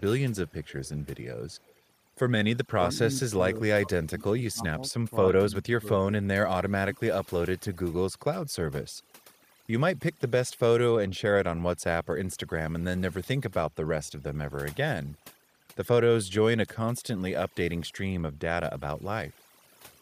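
Speech in which the background has been scrubbed down and breaks up into twinkling specks. This is overdone noise removal: the suppressor was set so hard that it shuts off frequency bands near its noise estimate and takes quiet parts of the voice with them. From 0.47 to 1.07 s and from 1.49 to 1.8 s, a faint delayed copy of the voice trails about 198 ms behind, roughly 30 to 35 dB below it. This is likely echo leak, where a loudspeaker-side echo canceller let part of what its microphone heard slip back. At 2.79–3.39, 3.55–4.64, 5.51–5.87, 6.24–6.28, 6.54–6.77 and 6.93–7.31 s the voice dips by up to about 30 dB or cuts out in pieces. That is likely speech suppressed in double talk, with the canceller turning the talker down while the far side was also speaking.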